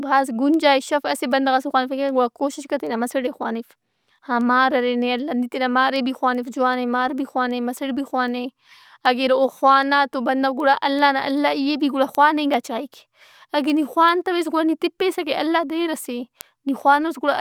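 From 0.16 s to 17.18 s, sharp ticks of uneven strength recur through the speech about every 0.4 s, roughly fifty in all. These are word clock ticks: the receiving device runs unlocked to the sender's clock, apparently about 50 ppm off, so single samples slip regularly.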